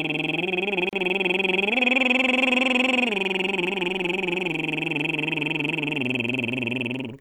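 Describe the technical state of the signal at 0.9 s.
At 0.89 to 0.93 s the music breaks for about 36 ms at a gap at a join of encoded pieces. The two sections were encoded on their own and spliced untrimmed, so the silent start-up delay of one encoder run and the padded last frame of the other both remain. Unlike a dropout, nothing is skipped: the music picks up exactly where it halted, and the codec softens the edges instead of leaving a hard click.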